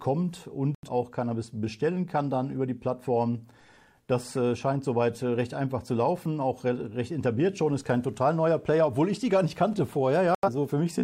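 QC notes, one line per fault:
0.75–0.89 s and 10.35–10.49 s, digital broadcast dropout: the receiver muted on bad frames, so the audio cuts to silence and resumes with about 85 ms of programme missing, consistent with two lost frames. The waveform shows a flat gap and the spectrogram a blank vertical band across all frequencies.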